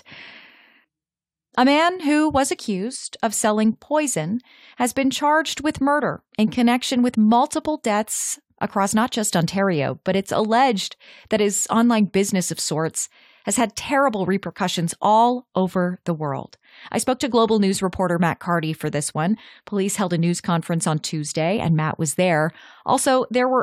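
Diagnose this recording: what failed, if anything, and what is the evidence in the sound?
Nothing in this speech recording stood out as a fault on listening.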